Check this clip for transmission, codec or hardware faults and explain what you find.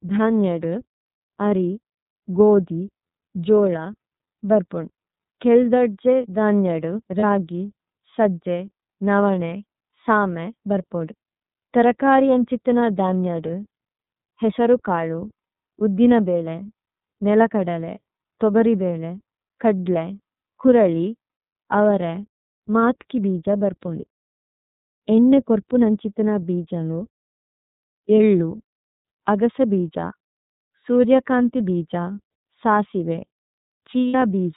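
Two faults can be heard: the whole recording has passed through the iLBC codec, and there are three brief dropouts where iLBC frames were lost.

The iLBC codec affects the speech from start to finish. Each frame's excitation is coded independently, and the band stops at 4 kHz, so the voice sounds muffled and plainly rough and synthetic. The damage fits iLBC's 30 ms mode at about 13 kbps. Ordinary low-pass filtering would dull the sound without making it coarse.

Lost iLBC frames occur at 7.20 to 7.24 s, 13.47 to 13.50 s and 34.08 to 34.15 s. The first two gaps last 30 ms, which fits a single lost frame. The third lasts 60 ms, which points to two. In each gap the decoder repeats the last pitch cycle mixed with noise, so a short buzzy, breathy held vowel fills it. A dropout would leave silence and a packet-loss click would be sharper. Here the voice also recovers immediately afterwards.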